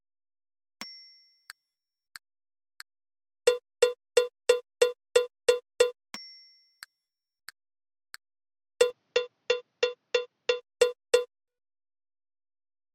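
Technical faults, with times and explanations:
8.90 to 10.61 s, input switched to a poorer device: the sound suddenly goes duller and a bit boxier, with nothing left above 6.9 kHz, drops around 5 dB in level, and picks up a faint new noise floor sitting roughly 50 dB under the signal. There's no gap at the switch. That combination of a narrower band, a different tone and a different hiss most likely comes from the recording hopping to a weaker microphone and then back.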